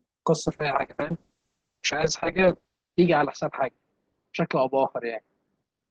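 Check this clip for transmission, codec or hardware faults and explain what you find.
There's one real problem here, a call bitrate drop that starts around 0.48 s and lasts to the end of the speech. The speech goes from reasonably clear Opus audio to something rough and muffled.

From 0.48 s the encoder is clearly starved of bits. It codes far more coarsely, and the top end narrows from about 12 kHz to 8 kHz, which fits a fall from roughly 32 kbps to around 6 kbps. It sits at its worst for about 2 s, giving that watery, dull texture.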